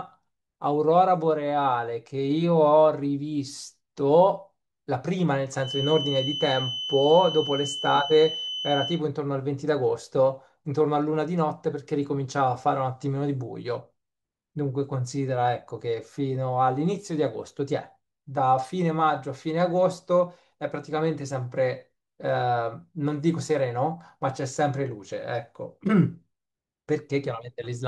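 From about 5.58 to 9.03 s there's a feedback whistle under the speech: a thin, steady tone at 3 kHz, sitting roughly 10 dB below the talking and swelling and fading slowly in level. What's likely going on is the loudspeaker-to-microphone loop hovering right on the edge of feedback, so that one frequency keeps ringing without actually building into a full howl.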